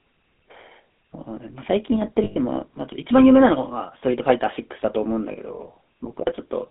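Speech throughout has a buzzy, gravelly roughness confined to roughly 200 Hz to 3.6 kHz, the plainly audible damage of the GSM full-rate codec, which fits its 13 kbps pulse-excited vocal-tract coding. At 2.24 to 2.38 s, about 120 ms, and again at 5.32 to 5.38 s, about 40 ms, the sound freezes into a rough metallic ring. These are lost GSM frames, concealed by repeating the last good frame's settings.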